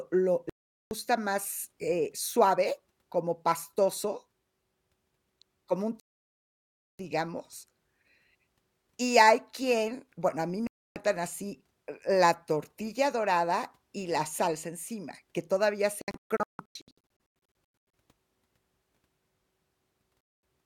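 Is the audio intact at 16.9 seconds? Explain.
No. At 16.9 s the speech is broken by short silent holes, the longest about 160 ms, between 16.02 and 17.29 s. This is a digital broadcast dropout: the receiver muted while frames were lost or failed their checks, about 1.15 s of audio in all.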